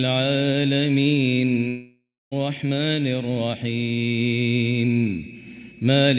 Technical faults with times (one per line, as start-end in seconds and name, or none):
1.68-2.33 long network dropout